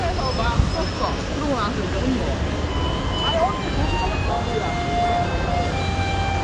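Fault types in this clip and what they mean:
AAC compression: nothing above 9.6 kHz, plus plainly audible smeared, warbling texture that a clean low-pass lacks; likely AAC-LC coding at a rate fitting 32 kbps.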